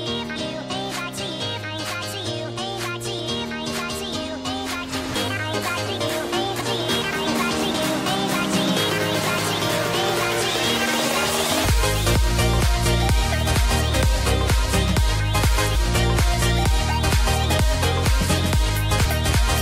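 At 0.35 to 0.37 s, and again at 6.60 to 6.62 s, a brief disturbance breaks into the sound. Each is damaged data in a compressed stream: corrupted bytes made the decoder misread those frames and lose sync until it locked onto a valid frame header again. These bursts are short.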